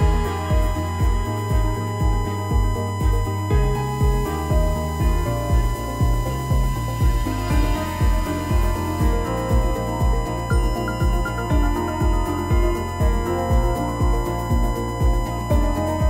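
Running under the whole clip is a steady, fixed-pitch whine at 1 kHz, a classic case of USB whine. It sits surprisingly high, around 15 dB below the audio itself, so you can hear it from start to finish. What's happening is that the USB bus pulls current in 1 ms frames, and that 1 kHz rhythm leaks into the audio path through shared power or ground wiring, turning into an audible tone.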